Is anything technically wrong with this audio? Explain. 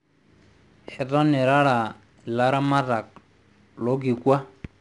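Yes. 4-bit ADPCM compression affects the speech throughout. Each sample is stored as a coarse 4-bit step from a predicted value, so a gritty hiss that tracks the level rides on every loud syllable, and sharp onsets crunch. Nothing sounds above 10.8 kHz, which fits a sample rate near 22 kHz.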